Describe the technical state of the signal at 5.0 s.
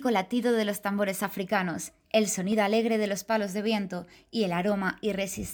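At 5.0 s the signal is intact, with no audible fault at that moment.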